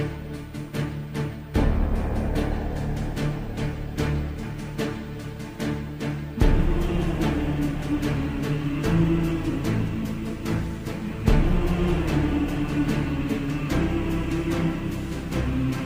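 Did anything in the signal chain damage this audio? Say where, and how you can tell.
No, nothing in the chain damaged it.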